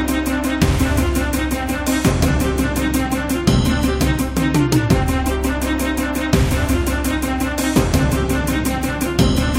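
No technical faults are audible.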